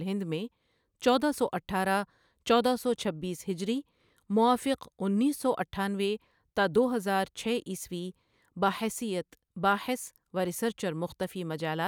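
No technical faults can be heard anywhere in this speech recording. Nothing in it calls for comment on technical grounds.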